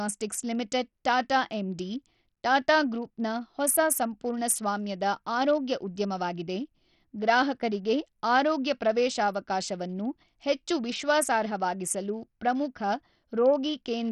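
From start to finish, the speech carries heavy coding damage, likely from Bluetooth SBC compression at a small bit pool, consistent with roughly 64 kbps. Starved upper sub-bands leave nothing above 14.8 kHz, the treble flickers, and gritty quantisation noise with aliasing rides on the voice.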